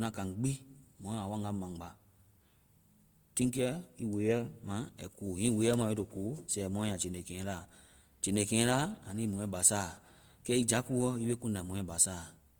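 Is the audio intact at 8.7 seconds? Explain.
No. The speech at 8.7 seconds, like the rest of the clip, was likely squeezed through Opus compression in its music mode at a rate that points to about 24 kbps. Band energies are kept but detail is filled with folded or noise-like content, so the voice sounds rough and grainy, with bandwidth still reaching about 20.2 kHz.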